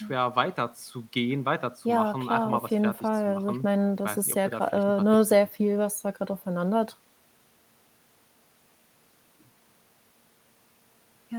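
No audible technical faults here.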